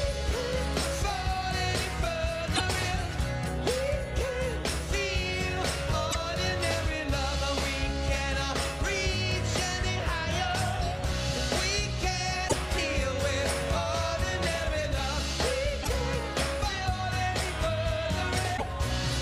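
Five short glitches break into the sound at 2.52–2.61 s, 6.08–6.16 s, 12.48–12.54 s, 15.79–15.87 s and 18.54–18.63 s, each lasting roughly 60 to 100 ms. These come from damaged data in a compressed stream: corrupted bytes leave the decoder unable to read those frames correctly, so it outputs garbage briefly, loses sync, and scans for the next valid frame header before clean playback resumes.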